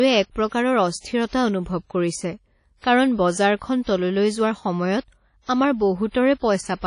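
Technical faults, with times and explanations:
Throughout: WMA compression. The speech carries a washy, ringing haze, with a hiss that swells and fades along with the voice, and everything above about 10.1 kHz is simply gone, leaving consonants dull and smeared. The damage is plainly audible. This likely comes from an early WMA encoding at around 32 kbps, where long transform blocks spread quantisation noise over tens of milliseconds and weak high-frequency content is discarded.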